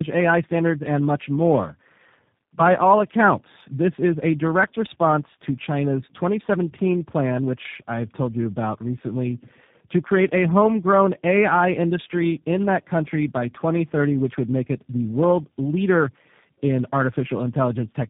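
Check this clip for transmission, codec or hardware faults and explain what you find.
Tandem speech coding affects the whole clip. The speech was decoded and re-coded through four speech codecs in a row, CVSD and G.729A twice each, each compounding the last one's damage. It sounds rough, muffled and warbly. A spectrogram shows nothing above 3.7 kHz and blurred, wavering harmonics.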